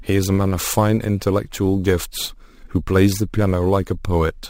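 Throughout the speech, a bright metallic fizz follows its loudness. This is imaging from sample-and-hold upsampling: unsmoothed repeated samples, fitting 22 kHz raised to 48 kHz, mirror the spectrum into 11 to 22 kHz, about 22 dB down.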